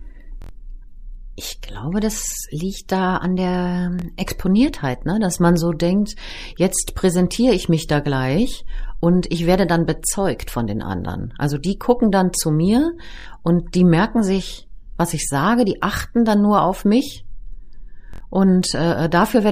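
Hard-edged stutters break the speech four times: at 0.42 to 0.51 s one tiny slice sounds five times in a row; at 3.99 to 4.02 s, just after "liegt da an der", a slice doubles; at 13.19 to 13.26 s, between "gucken dann zu mir" and "und die merken sich", and at 18.14 to 18.20 s, slices sound four times. These are repeated buffers. New audio arrived late, so the last block of about 23 ms, which fits a 1024-sample buffer, played again. Each stutter drops roughly 20 to 100 ms of speech.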